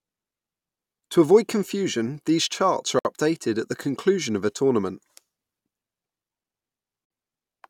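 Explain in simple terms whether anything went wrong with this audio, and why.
Separately encoded pieces of this speech were joined without trimming, leaving a gap at a join of encoded pieces about every 4 seconds. The speech briefly drops to silence at 2.99 s for about 59 ms and at 7.05 s for about 53 ms, then resumes where it stopped.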